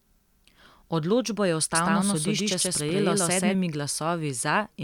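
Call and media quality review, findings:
Doubled audio track, 1.75 to 3.55 s: speech heard twice, an equal-level dry copy roughly 150 ms behind, abrupt onset and cutoff. Likely a second capture path or misaligned edit.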